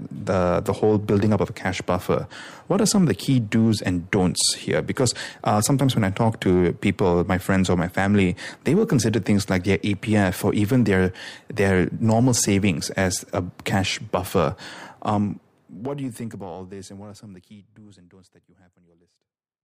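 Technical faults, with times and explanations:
Nothing stood out on listening to this speech, apart from a smooth fade-out over roughly the last four or five seconds, ending at 19.6 s.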